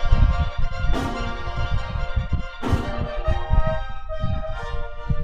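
Throughout, the audio was read two samples at a time (double speed): runs twice as fast and an octave (12 semitones) high; spectrogram shows upward-shifted bands, the waveform compressed in time.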